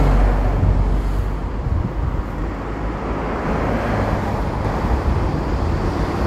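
A doubled audio track appears at 4.65 s and runs to the end of the clip. A second, full-band copy of the sound cuts in abruptly and trails the original by roughly 0.7 s, sitting around 5 dB quieter. That most likely comes from the signal being captured twice, once through a slower path. Because the copy carries no decay or room colour, it reads as a flat, detached repeat rather than an echo.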